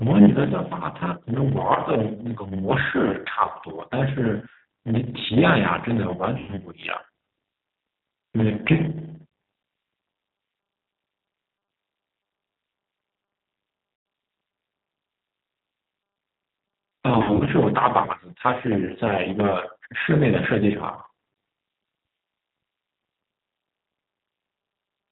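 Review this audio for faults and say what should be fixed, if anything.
A steady 100 Hz buzz runs under the whole recording, and the speech drags about 8% slow at nearly normal pitch. This is a padded block size mismatch: each block carries a short zero-filled gap, repeating 100 times a second. Make the producing and consuming stages use the same block size.

The whole clip sounds band-limited below 4 kHz, slightly rough and synthetic, with plainly audible codec damage. This is the G.729 codec at 8 kbit/s, which rebuilds speech from a filter, pitch predictor and sparse pulses. Use a wideband codec wherever the link allows it.

At 6.38–6.52 s and 13.96–14.06 s, the speech is stretched into a buzzy tone or coloured noise that fades. At 17.18–17.48 s, the same happens in scattered bursts. This is VoIP packet loss concealed by the speech codec. About 100 ms went missing in each of the first two spots, which fits runs of lost 20 ms packets. 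The third spot lost about 160 ms spread over roughly 280 ms. Reduce loss on the network path or add forward error correction.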